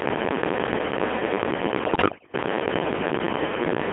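Throughout, the speech has passed through the Codec 2 vocoder at 2.4 kbit/s. The vocoder transmits only pitch, voicing, energy and a spectral envelope, then rebuilds the voice from sine waves inside a 200 Hz to 3.4 kHz band. The heavy damage leaves it robotic and buzzy.

From 1.85 to 2.34 s, bit errors on digital voice radio corrupt the frames reaching the decoder, with roughly one bit in ten flipped. Each wrong bit misdirects a whole frame's pitch, level, voicing or spectrum, so the voice lurches in pitch and loudness and dissolves into warbling, bleeping gibberish.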